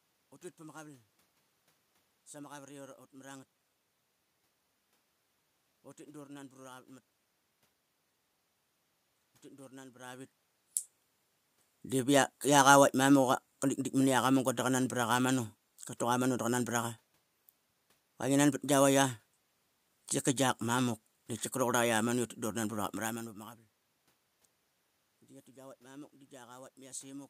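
No technical faults are audible anywhere in this speech recording.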